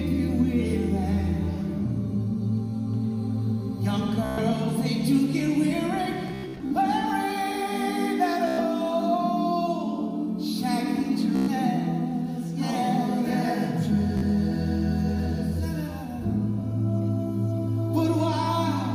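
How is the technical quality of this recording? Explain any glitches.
The recording has repeated Bluetooth stutter. It occurs at 4.25 to 4.39 s, 6.28 to 6.72 s, 8.48 to 8.60 s, 11.36 to 11.49 s and 14.17 to 14.23 s. Late or lost packets made the receiver replay its last buffer, which fits slices of about 15 to 25 ms each, so the sound buzzes in a machine-gun stutter. The gaps it fills range from 46 ms at 14.17 s to 244 ms scattered across 427 ms at 6.28 s. After each stutter the sound resumes further along, as if it had kept playing.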